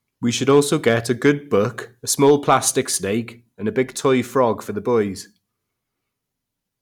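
A speech clip with two stretches of hard clipping. From 0.49 to 1.29 s, and again from 2.23 to 2.57 s, the level runs past what some stage in the chain can pass, so the peaks get sheared flat. The overload is modest, about 2 dB in the first stretch and about 3 dB in the second, so you hear a gritty crackle riding the loudest moments rather than constant fuzz, from harmonics the flattened tops throw up high.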